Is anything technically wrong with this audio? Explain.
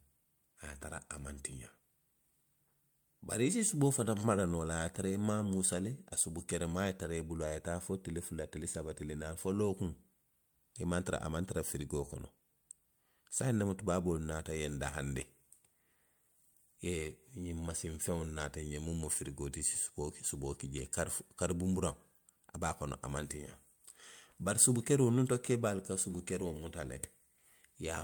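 No, nothing is technically wrong.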